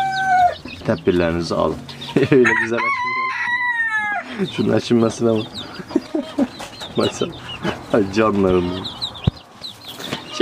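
Audio with three abrupt drops of about 6 dB, at 2.70–4.39 s, 6.07–6.23 s and 9.38–9.89 s, likely one channel dropping out before the mono sum.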